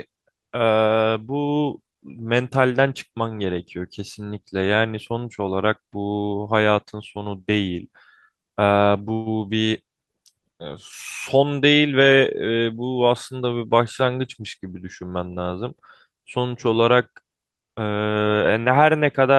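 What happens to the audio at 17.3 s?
Nothing goes wrong at 17.3 s; the speech carries on intact through that moment, with no dropout, click or distortion.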